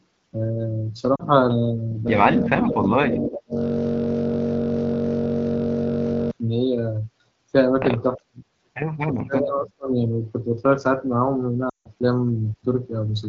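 At 1.15 s there is a brief warble and dip lasting about 40 ms. These are lost AMR speech frames: corrupted frames failed their check, and the AMR-WB decoder filled the gap by reusing the last good pitch and vocal tract settings at reduced gain.

From 2.08 s to 6.31 s the audio locks into a steady buzz at 46.9 Hz, with one 21.33 ms slice repeating nearly 200 times. This is a system hang loop. The computer stalled while the sound hardware kept replaying the same ring buffer, which fits a 1,024-sample buffer.

Underneath, from 2.44 s to 3.57 s, the talker dips and breaks up for about a second in total, falling by about 25 dB at worst. This is speech suppressed in double talk. Most likely the echo canceller could not separate the talker from loudspeaker echo while both sides spoke, so it turned both down.

At 2.63 s a delayed copy of the voice slips through, arriving 366 ms late at roughly 10 dB below the speech. 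This is an echo leak, likely from a loudspeaker on one side whose echo canceller failed to remove everything its microphone picked up.

The same double-talk suppression returns from 8.16 s to 8.44 s, a sharp cut of roughly 40 dB over about 200 ms. It appears again from 9.10 s to 9.91 s, with drops of around 30 dB spread over about 700 ms.

At 11.69 s, a longer run of lost frames, 160 ms in all, drops the sound to near silence within two frames. The wideband decoder's concealment runs out of gain faster than narrowband would. The 12.65 kbit/s wideband coding itself stays clear around these faults.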